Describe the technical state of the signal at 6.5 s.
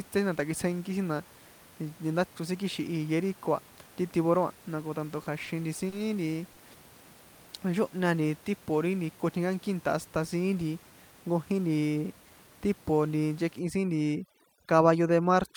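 A sound is held unnaturally long from 6.52 to 6.59 s, with a slight buzz or dip: a short stall from a late packet, where the emptied jitter buffer stretched about 50 ms before resuming without loss.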